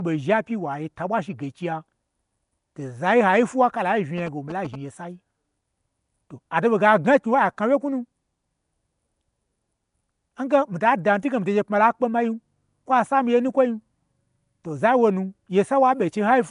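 Throughout, the speech carries a rough, hissy halo and an underwater smear, with nothing above 10.6 kHz, likely Nellymoser compression at roughly 44 kbps; noise-filled bands set it apart from MP3 swirl. From 4.18 to 4.76 s, GSM signalling bursts add a galloping dit-dit-dit of short buzzes repeating at about 217 Hz, well below the speech. Unlike steady mains hum, it arrives in short gated groups.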